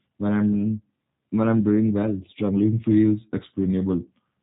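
Speech sounding thin, slightly rough and synthetic throughout, with nothing above 3.8 kHz, plainly points to G.729 codec coding at 8 kbit/s, rebuilding each frame from a few pulses.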